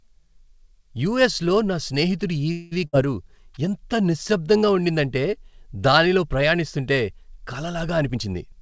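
A speech clip carried over a call path, with nothing heard above 8 kHz, which fits a G.722 codec at 64 kbps. Just after "యూఎస్లో నా స్నేహితుడి", from 2.52 to 2.73 s, the sound stalls. The last sound is stretched into a buzz that fades but never reaches silence. This lasts about 194 ms. The speech then picks up where it stopped, with nothing lost, only later. That is a call audio freeze. Packets were likely held up in transit, so the jitter buffer ran dry and the receiver filled the wait. Shortly after, from 2.87 to 2.95 s, there is a burst of packet loss. About 54 ms is filled with a held, dimming continuation of the previous sound. Then the speech jumps ahead. Around 60 ms of the original is missing. Several packets in a row never arrived in time, so the receiver covered the hole and skipped past it. From 8.02 to 8.60 s there is a jitter buffer speed-up. The speech runs at about 116 percent of normal speed but keeps its pitch, so it sounds hurried. 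The buffer had built up extra delay. The receiver cut many tiny pitch-period slices, about a tenth of a second in total, to catch up.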